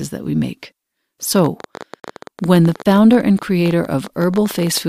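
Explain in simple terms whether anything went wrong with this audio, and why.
A train of clicks runs from 1.36 s to 4.78 s: about fifty sharp ticks, roughly 15 per second at an uneven pace, each about as loud as the speech itself. Repeated pulses like these likely come from electrical interference or a faulty connection or power supply.

There is also a gap between stream segments from 2.00 s to 2.04 s. The audio cuts to silence for about 38 ms with abrupt edges, because two pieces of the stream did not line up in time and the player filled the hole with nothing.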